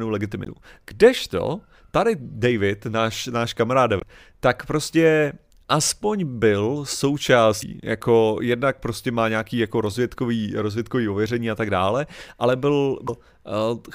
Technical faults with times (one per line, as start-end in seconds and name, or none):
0.43-0.48 damaged data in a compressed stream
3.99-4.03 damaged data in a compressed stream
7.59-7.63 damaged data in a compressed stream
13.05-13.09 damaged data in a compressed stream